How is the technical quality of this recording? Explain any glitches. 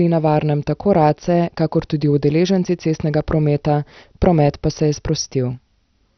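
Poor throughout the speech. It sounds dull and muffled, with nothing above 6.2 kHz, and a gurgling, granular roughness runs through it. The likely cause is heavy MP2 compression at a low bitrate, which fits around 48 kbps. The coder shuts off its upper sub-bands, switches bands on and off so they flicker, and quantises the remaining bands coarsely.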